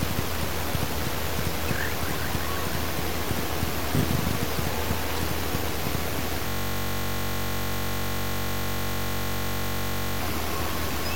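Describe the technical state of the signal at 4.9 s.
At 4.9 s the signal is intact, with no audible technical fault in the audio at that moment.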